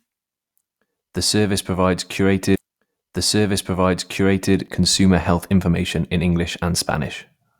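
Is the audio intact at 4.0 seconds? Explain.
No. At 4.0 seconds the clip is inside a stream segment repeated fault, running from about 2.55 to 4.55 s. Right after "service provides", the player queued the same two-second chunk a second time, so a full 2 s of speech plays again before it continues into "consumer health information in". A small blip marks the jump back. Unlike a stutter, which loops a few milliseconds, this repeats a whole stretch of speech intact.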